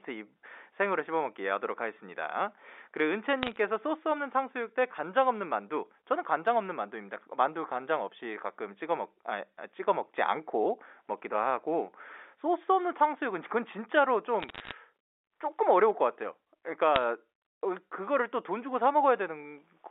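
Bit errors on a digital phone line crackle over the speech at 3.43–3.56 s, 14.40–14.72 s and 16.96–17.01 s. Flipped bits in the G.711 stream corrupt single samples into sharp ticks.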